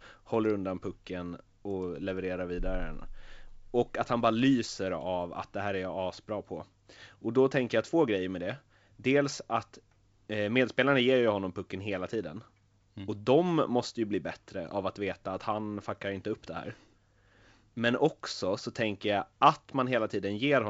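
No technical faults occur anywhere in this speech, which comes through G.722 wideband telephone coding at 64 kbit/s.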